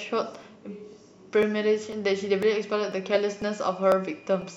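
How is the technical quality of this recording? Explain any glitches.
The speech carries a steady ticking caused by periodic USB or driver dropouts. From 0.43 s to 4.42 s, roughly every 0.50 s, about a millisecond of audio is skipped when something stalls the bus or driver, leaving a pop. The strict, even spacing sets it apart from random packet-loss glitches.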